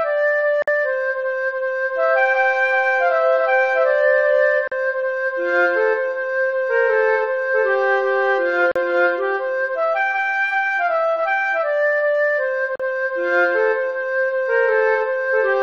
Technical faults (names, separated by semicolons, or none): gap at a join of encoded pieces